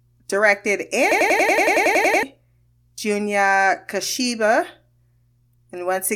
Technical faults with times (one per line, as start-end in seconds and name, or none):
1.11-2.23 system hang loop